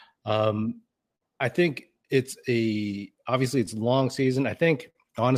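Throughout the speech the pacing feels slightly uneven. This is clock drift between sender and receiver, with the sender's clock running about 4% slower than the receiver's.

From 0.23 to 4.64 s, small hiccups and a faintly dragging tempo come from repeated timing corrections. The receiver keeps repeating short pieces, slowing playback to 98% and adding around a tenth of a second.

At 1.16 to 1.23 s, and again at 4.90 to 4.97 s, a sound is held unnaturally long with a slight buzz or dip. These are short stalls from a late packet: the empty jitter buffer was filled by stretching audio for 55 ms and then 49 ms, with nothing lost.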